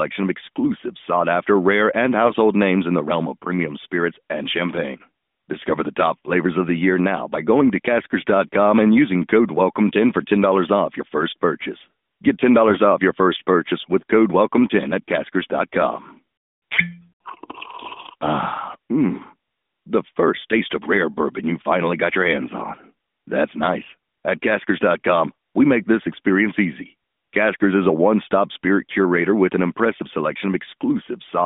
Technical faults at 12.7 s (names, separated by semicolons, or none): AMR bit errors